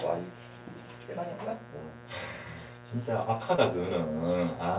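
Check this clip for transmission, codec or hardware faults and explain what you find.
Two faults are audible: a steady buzz throughout and one brief dropout. The audio has nothing above 4 kHz, which points to a narrowband call codec such as G.711.

Mains buzz runs through the whole clip. Its fundamental is 60 Hz. Sharp switching spikes from a dimmer, rectifier or poor shielding add harmonics well up the band. It sits roughly 15 dB below the wanted sound. It is heard as a constant, raspy buzz.

Short concealed packet loss occurs from 3.56 to 3.60 s. A slice of audio arrived too late for the decoder. 20 ms was missing, and the receiver extended the preceding sound for 15 ms, then blended back into the real audio. It is heard as a brief smear.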